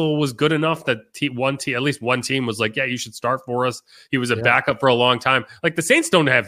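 No technical faults are audible.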